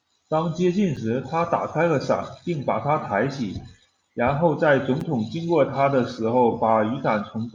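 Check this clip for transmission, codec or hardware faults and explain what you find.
Two brief dropouts are present, both a block of digital silence. At 0.96 s the speech cuts out for 5.8 ms, which fits a 256-sample block left unfilled. At 5.01 s a second gap lasts about 7.7 ms. Each edge is hard, with no fade, and gaps this short sound like a tick or dip rather than silence.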